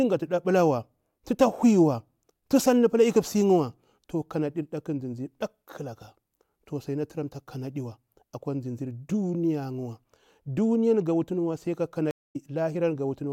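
A speech recording drops out near its end: just after "ga wutuniwa sai ka", the sound cuts to silence at 12.11 s for about 0.22 s, then returns at 12.36 s having skipped ahead, so a short stretch of roughly 150 ms is simply missing. This is a stream reconnect. The connection broke, the player fell silent, and after reconnecting it started a fresh decoder partway into a live stream, so the audio resumes later than where it stopped.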